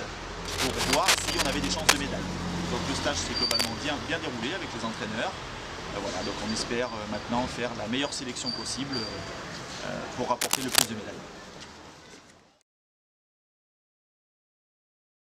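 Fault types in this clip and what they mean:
cable scratch noise: 0.45–1.97, 3.51–3.68 and 10.41–10.86 s, scratchy bursts at or above the sound's level, likely a worn contact's resistance fluctuating as it moved.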